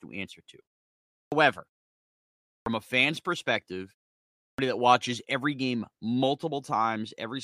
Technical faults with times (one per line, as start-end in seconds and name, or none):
1.16-1.32 clipped start after a pause
2.51-2.66 clipped start after a pause
4.43-4.58 clipped start after a pause